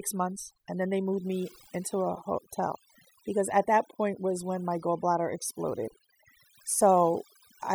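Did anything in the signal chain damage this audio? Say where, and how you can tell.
Yes. The damage comes from call processing: overdone noise removal, audible throughout the speech. Gaps between phrases fall to near silence dotted with twinkling specks. The suppressor was set too aggressively, so any frequency band close to its noise estimate was pulled far down or shut off, taking the quiet parts of the voice with it. On a spectrogram the background looks like scattered isolated dots, and the speech harmonics appear ragged, with holes in them.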